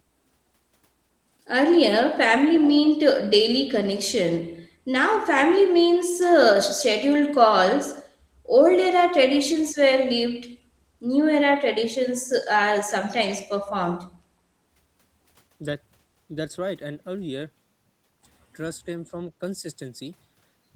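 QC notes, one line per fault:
2.55–2.88 s, echo leak: a faint copy of the speech trails the original by 381 ms, roughly 15 dB lower, likely loudspeaker pickup the echo canceller failed to remove. On a spectrogram the same harmonic pattern repeats, shifted right and fainter.
19.05–19.13 s, speech suppressed in double talk: the speech briefly drops by around 5 dB for about 70 ms, likely the echo canceller treating overlapping talk as echo and turning it down. The waveform envelope shows a short notch; the spectrogram fades momentarily.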